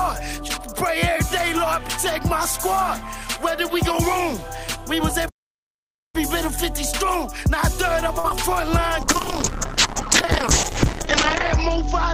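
The audio cuts out abruptly from 5.28 to 6.16 s, about 0.85 s of silence in mid-flow, before resuming. That playback stall is likely the player running out of buffered data or having its thread blocked until output could continue. At 8.19 to 8.25 s a sound is held unnaturally long, for about 48 ms, with a slight buzz or dip, and then carries on with nothing skipped. This is a short stall from a late packet: the jitter buffer emptied, so the receiver stretched the last sound until the packet arrived. Just after, at 8.29 to 8.31 s, there is a brief smear or wobble where roughly 10 ms of real audio is replaced by about 11 ms of synthesized continuation. That is short concealed packet loss, the decoder extrapolating from the preceding sound and blending back in. From 9.02 s to the end the audio turns coarse, watery and muffled, with the upper treble gone. This is a call bitrate drop from 40 to 11 kbps, held at its lowest for about 2.1 s, with the coded bandwidth narrowed from 20 kHz to 8 kHz.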